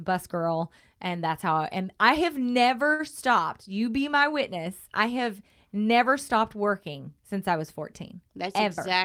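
A short stall from a late packet occurs at 2.93 to 3.01 s, just after "I and I have": the jitter buffer ran dry, so the last sound is held about 59 ms too long, with nothing lost.

A jitter buffer speed-up runs from 8.47 to 9.03 s, where tiny pitch-period slices, around 40 ms in total, are cut to shrink excess delay, so the speech hurries at about 106% without changing pitch.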